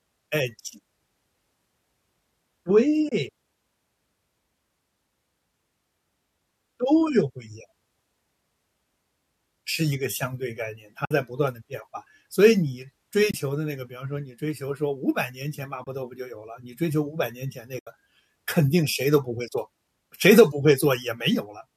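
AAC frame loss with muting occurs at 3.09–3.12, 11.05–11.11, 13.31–13.34, 15.84–15.87 and 17.79–17.87 s, leaving gaps of about 30, 60, 30, 30 and 80 ms. Missing frames, likely from low-delay AAC, were decoded as silence, so overlapping windows fade the speech out and back in.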